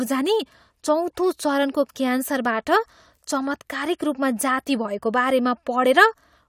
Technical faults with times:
none

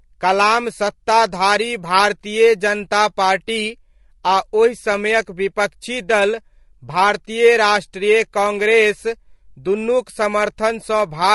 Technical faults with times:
0.00-11.34 low-delay AAC compression

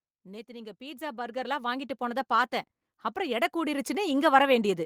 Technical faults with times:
0.46-2.59 automatic gain rising
3.14-4.17 automatic gain rising

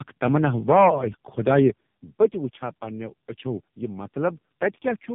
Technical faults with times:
0.00-5.14 tandem speech coding

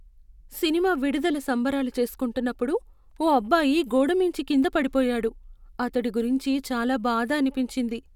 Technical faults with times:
none

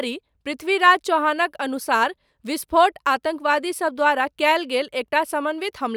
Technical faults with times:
none

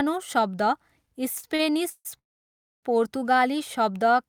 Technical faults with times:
1.35-2.07 repeated stalls (stutter)
2.19-2.85 call audio freeze

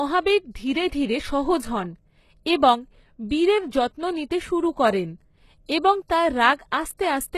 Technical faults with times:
0.00-7.38 HE-AAC compression
3.70 pre-echo

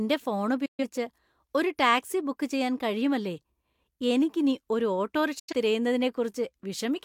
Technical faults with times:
0.65-0.84 digital broadcast dropout
5.39-5.53 digital broadcast dropout

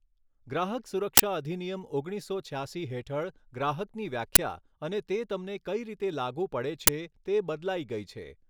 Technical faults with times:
1.17-1.20 uninitialised buffer
4.35 uninitialised buffer
6.87 uninitialised buffer

